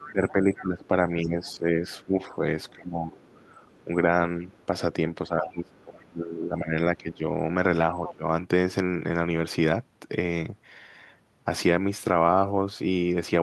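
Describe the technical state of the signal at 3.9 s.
Right at 3.9 s you're at the tail end of a short bit of speech suppressed in double talk, running from 3.85 to 3.9 s, so about 50 ms. The talker's level dips by roughly 10 dB there. The likely cause is the echo canceller getting confused with both sides active: it can't pull the near talker apart from the loudspeaker echo, so it ducks everything briefly, and you hear a quick sag in the voice.

That dip comes straight after the other side's voice leaking through, from 2.68 to 3.84 s. It's faint, sitting somewhere around 35 dB under the talker, more a ghost in the background than a second voice you'd follow. It's likely loudspeaker playback that the echo canceller didn't fully scrub from the mic, so residual far-end audio rides along underneath. The suppression kicks in just as that leak ends.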